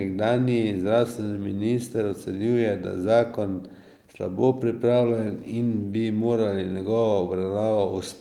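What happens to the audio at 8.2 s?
Small timing hiccups, with brief repeats or momentary gaps, continue through 8.2 s as they do across the whole clip. This is clock drift between sender and receiver: the sender's clock runs roughly 3 percent slow, draining the jitter buffer.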